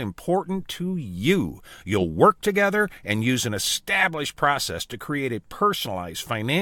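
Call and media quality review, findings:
Compressed frames skipped at 5.85 s in the speech: the decoder jumps past about one frame, roughly 20 ms. Frame length fits a 23.2 ms codec frame. Probably a missing or rejected frame in the decoder.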